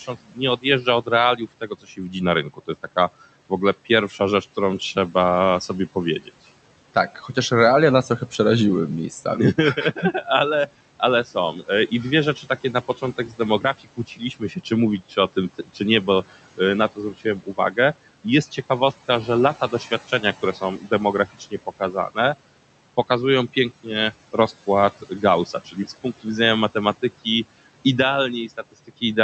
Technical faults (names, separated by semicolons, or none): noise suppressor artifacts; speech cut by the noise suppressor